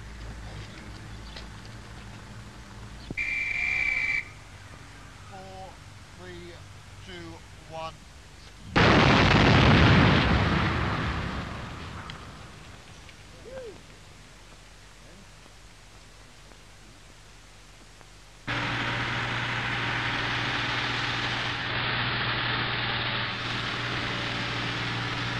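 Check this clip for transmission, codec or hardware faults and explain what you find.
One fault is present: digital radio blending to analogue, from 21.47 to 23.51 s. The receiver lost its digital stream and cross-faded over 315 ms to the AM broadcast. The sound turns dull. Hiss rises, well below the signal, and the level shifts by about 1 dB.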